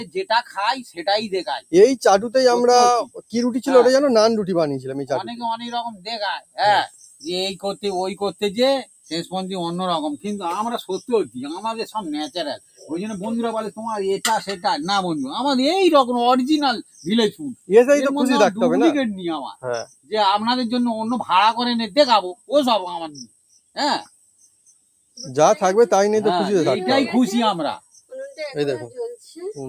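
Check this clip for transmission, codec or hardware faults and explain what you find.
Two related faults show up: a speech-tuned noise suppressor is processing audio it wasn't built for.

The noise suppressor applied to music or sounds runs through the whole clip. It treats sustained content as background noise and pulls it down, so level swings by around 15 dB. Onsets pass while held material sinks, giving a pumping, thinned character.

Sound cut by the noise suppressor occurs at 0.0–3.34 s (deepest drop about 17 dB), 5.9–12.9 s (about 16 dB), 16.82–17.69 s (about 17 dB), 19.55–20.12 s (about 19 dB), 22.34–25.19 s (about 19 dB) and 27.79–29.37 s (about 18 dB). In these stretches, steady and decaying parts are attenuated for brief spans totalling from under half a second to about two seconds, so tails are clipped short.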